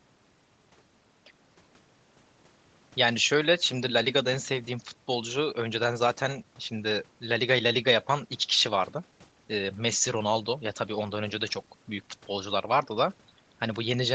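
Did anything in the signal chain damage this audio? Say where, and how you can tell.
No, nothing in the chain damaged this speech; the top end stops at about 8 kHz, which is just what a normal call path does, from the microphone processing through a call codec set to that bandwidth.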